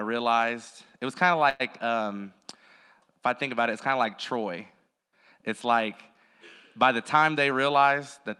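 At 1.49 s, right after "it was kind of", the speech stalls until 1.70 s, before "um if I think". A call audio freeze like this is likely caused by packets arriving late and the jitter buffer running empty. The receiver stretched the last sound into a brief fading buzz that fills about 103 ms. When the speech resumes, nothing is lost. The rest of the clip simply plays 103 ms later than before.

From 7.15 s, just after "by the", a jitter buffer speed-up runs until 8.30 s. The buffer was holding more audio than it needed. To trim the extra delay, the receiver cut many tiny slices, each a pitch period or so long. Together they remove about a tenth of a second. The speech plays at about 107% speed with its pitch unchanged, so this stretch sounds slightly hurried. The Opus call path limits the audio to 12 kHz.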